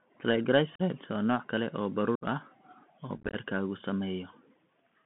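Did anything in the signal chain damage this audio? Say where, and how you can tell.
Yes. The damage sits at the codec stage, across the whole clip. The speech is confined to roughly 150 Hz to 3.4 kHz, with nothing in the upper band. That points to the Bluetooth CVSD headset codec, and it fits a 64 kbps CVSD link. The damage is plainly audible. CVSD sends one up-or-down bit per sample and adapts its step size, so fast loud transients outrun the step and come out distorted, sibilants turn scratchy, and a granular hiss runs underneath.

The second problem is at the wireless link between headset and phone: unconcealed Bluetooth headset packet loss. There are abrupt holes from 0.75 to 0.81 s and from 2.15 to 2.24 s, and a rough, chopped stretch from 3.17 to 3.36 s. In that last span the dropouts are scattered over about 180 ms, the longest run lasting about 19 ms. Lost packets of a few milliseconds each were replaced with silence or an idle pattern, with nothing to conceal them, so the edges are hard.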